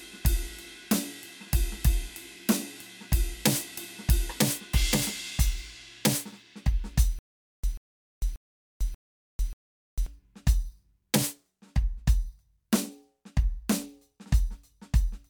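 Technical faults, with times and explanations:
7.19–10.06 s, stutter with silent gaps: a 139 ms burst of music repeats five times every 585 ms, with 447 ms of silence between, likely from a stalling player.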